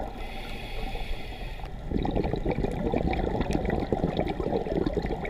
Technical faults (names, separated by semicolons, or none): corrupt frame decoded